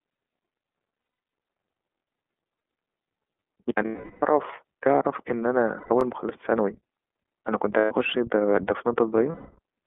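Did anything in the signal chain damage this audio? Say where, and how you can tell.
Yes. The speech sounds boxed-in and slightly rough and synthetic, limited to about 250 Hz to 3.5 kHz. That points to the iLBC codec, consistent with 13.33 kbps and 30 ms frames.

Buzzy, held vowel-like patches at 1.01–1.31 s (scattered), 3.85–4.23 s, 5.77–5.90 s, 7.79–7.92 s and 9.32–9.59 s are lost iLBC frames. These are network losses concealed by repeating pitch cycles.

A brief stutter at 6.01–6.03 s repeats about 23 ms of sound. These are overlapping chunks: a buffer stage whose 4 s chunks start before the previous one ends.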